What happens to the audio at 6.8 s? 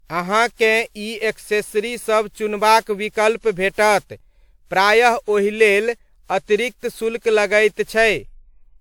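At 6.8 s the speech sounds swirly, hollow and smeared, with blurred attacks, as it does throughout. This is likely generation loss: repeated lossy encoding, about seven passes, consistent with WMA near 128 kbit/s, each requantising on a shifted frame grid so noise accumulates.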